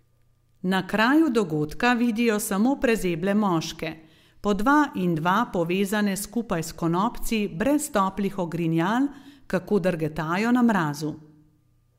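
This speech clip... no, must not start that way.

A speech recording with one sharp click at 5.03 s. Dropped samples are the likely cause. A fraction of a millisecond is missing, so the waveform jumps abruptly.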